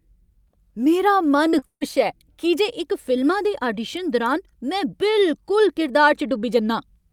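From 1.51 to 1.85 s, repeated packet loss (robotic sound) hits the speech: packets drop out again and again, and each hole is patched by stretching the preceding sound, about 200 ms in all, the longest gap 150 ms. Over half that stretch sounds choppy.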